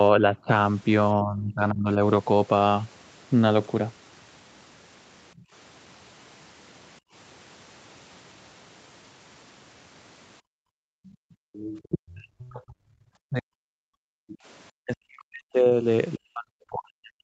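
From 0.21 to 1.99 s the talker dips in pieces, up to roughly 20 dB, for under a second in total. This is likely speech suppressed in double talk: the canceller turned down the voice along with the echo. The voice itself drops, not just the room.

At 5.36 to 5.45 s a faint scrap of a second voice appears far beneath the talker, likely the other side's voice leaking through from the loudspeaker. It is an added voice rather than a loss of level.

At 7.0 to 7.13 s the room tone vanishes for a moment, about 31 dB down, then returns. This is background gated by the echo canceller.

The same gating happens from 10.41 to 11.54 s, about 36 dB deep. Overlapping it, 11.07 to 11.88 s brings a stronger stretch of what is likely leaked far-end voice, around 20 dB below the talker.

From 11.91 s to the end, what is likely the double-talk suppression returns much harder, cutting the talker by up to about 40 dB.

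Within that stretch the background is gated again from 13.8 to 14.29 s, about 38 dB down. Right after, at 14.29 to 14.38 s, a brief fragment of the other side likely leaks through, roughly 25 dB below the talker.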